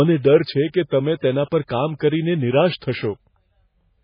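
Throughout the speech the sound is watery and swirling, with heavy codec damage and nothing above 5 kHz, so it is dull and muffled. This is most likely MP3 compression. At a bitrate that sounds as low as about 16 kbps, the encoder runs out of bits and drops the weaker frequency lines, which flicker on and off from frame to frame. It also cuts off all the treble above a fixed point.

Pre-echo appears three times. The first is at 1.21 s, just after "છે કે તમે", where a brief hiss of about 11 ms comes before an attack and softens it. The second is at 1.67 s and lasts about 18 ms. The third runs from 2.79 to 2.82 s and is the longest at 30 ms. Each time a sharp onset fell late in a transform block, and the codec spread that block's quantisation noise across the quiet moment before the onset.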